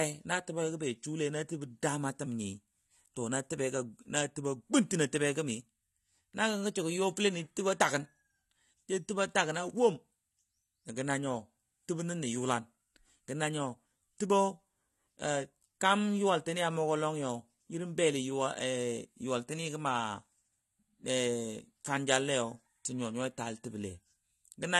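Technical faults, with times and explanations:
Throughout: AAC compression, plainly audible, likely from AAC-LC at around 32 kbps; the band stops at 12 kHz, leaving the speech dull and smeared.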